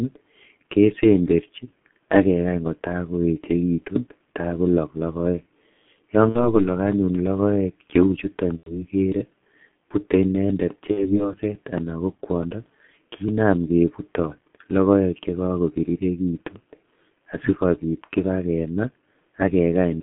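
Throughout, the speech carries heavy G.723.1 codec damage. The band is confined to about 150 Hz to 3.4 kHz, and the coarse, slow-updating model of a low-rate 30 ms-frame coder, consistent with roughly 6.3 kbit/s, leaves it muffled and hoarse with smeared consonants.

VoIP packet loss concealed by the speech codec occurs at 6.29–6.56 s, 8.57–8.85 s and 10.91–11.27 s. The decoder extrapolates over missing stretches of about 60, 90 and 60 ms, producing fading buzzy or noisy fill, and the speech stays weakened for a while after each gap.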